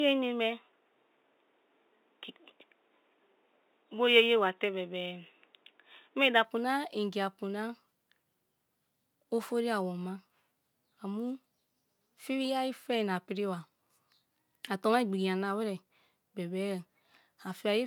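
From the start to 6.45 s, the speech sounds dull and boxy. Nothing reaches above 3.8 kHz. A faint new background noise sits far below the speech. At the change there is no gap and no jump in level. The likely cause is an input switched to a poorer device.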